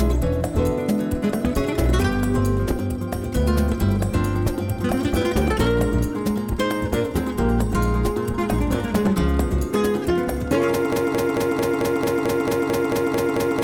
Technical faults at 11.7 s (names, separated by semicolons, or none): broken-record loop